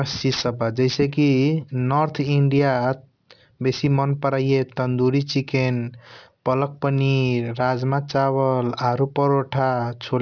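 From start to finish the speech carries aliasing: the audio was resampled downward without a proper low-pass filter first, which fits a drop from 48 kHz to 11 kHz. Energy above the 5.5 kHz fold point reflects back into the band as unrelated frequencies, roughly 20 dB under the speech, so sibilants sound gritty and metallic. On a spectrogram, content runs hard up to 5.5 kHz, with mirrored, wrongly sloped traces beneath that edge.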